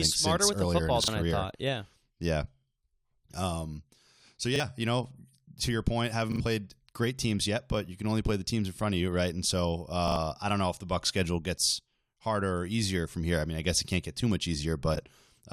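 Audio arrived late four times, so the device replayed its last 40 ms buffer: a repeated buffer at 1.04 s, at 4.56 s before "you know to your", at 6.32 s after "to your point having", and at 10.08 s before "I don't know if". The first two repeat once, and the later two repeat twice, each a short stutter with hard joins. At 14.95 s, two neighbouring frames of about 21 ms each decoded in swapped order. These frames out of order cause a brief garbled flutter.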